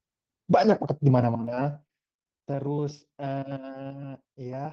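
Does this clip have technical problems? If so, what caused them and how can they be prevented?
Yes, there are two kinds of fault in this speech clip.

Zipper noise runs from about 1.24 to 2.13 s. The level drops by roughly 10 dB, but it moves in 2 dB jumps at around seven a second instead of a continuous ramp. Each jump puts a tiny click into the waveform, so you hear a ticking, zippery texture sitting on the speech while the level falls. Interpolating the gain per sample, or smoothing it over a few milliseconds, prevents this.

There are also three short stalls from late packets, at 1.55 to 1.63 s, 1.87 to 1.90 s and 2.39 to 2.43 s. Each time the next packet hadn't arrived, the jitter buffer ran dry and the receiver held the last bit of sound: about 16 ms, 27 ms and 29 ms respectively. Nothing is lost, but the sound briefly hangs with a slight buzz or dip. A slightly deeper or adaptive jitter buffer would absorb delays like these.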